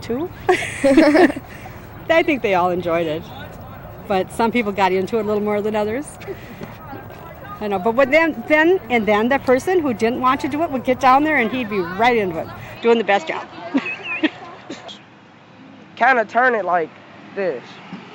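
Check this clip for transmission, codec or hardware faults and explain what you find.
One fault: at 12.77 s the input likely switched to a poorer device, whose narrower band cuts everything above 7.5 kHz. From there to the end the sound turns duller, with no gap at the switch, similar level, and a faint new noise floor.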